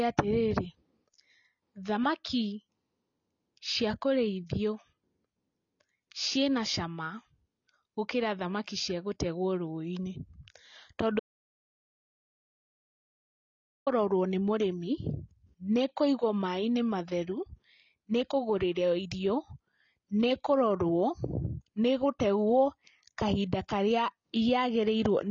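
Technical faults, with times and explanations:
Throughout: AAC compression. The whole clip has that dull, smeared quality, with nothing above 7 kHz and a fizzy, warbly edge on the sibilants and sustained sounds. That's most likely a lossy AAC-LC encode, and the damage is plainly audible, which points to a low bitrate of about 24 kbps. At that rate the encoder gives up the top end and coarsely quantises what's left, so some bands get thinned out or smeared between frames.
11.20 to 13.87 s: audio dropout to silence. The speech cuts off mid-flow and there's about 2.67 s of dead silence. It isn't a quiet room; the background tone disappears too. Then the sound jumps back in partway through. The likely cause is the input being lost for a moment, such as a device or link failing or a stray mute, while the recorder kept writing silence. Whatever was said in that gap is simply gone.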